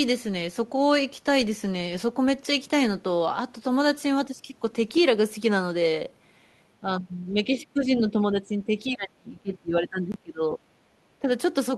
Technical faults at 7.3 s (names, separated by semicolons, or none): speech suppressed in double talk